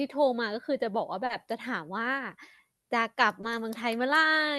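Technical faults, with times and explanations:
1.25 to 1.31 s and 3.41 to 3.45 s, short concealed packet loss: about 40 ms of audio and then about 20 ms failed to reach the decoder in time. The receiver covered each gap by extending the preceding sound, carrying its pitch forward where it was voiced or shaping noise where it wasn't, then crossfading back into real audio. That produces a brief smear or wobble at each point, and any short consonant falling inside a gap can drop out.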